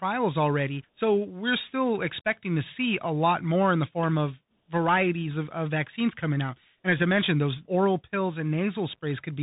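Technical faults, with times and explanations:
Throughout, Bluetooth CVSD headset codec: the speech is cut off above about 3.8 kHz and carries a granular hiss that rides with the signal, while loud, bright sounds and s sounds turn rough and scratchy as the one-bit up/down steps fail to keep pace. The damage is plainly audible and fits a 64 kbps CVSD link. A simple low-pass filter would leave no hiss or grit, and frame-based narrowband codecs sound warbly or metallic instead.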